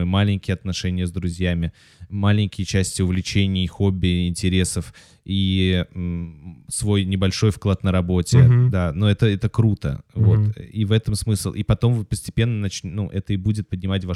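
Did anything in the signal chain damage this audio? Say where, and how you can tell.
No, nothing in this speech recording stood out as damaged by any stage of the signal chain on listening.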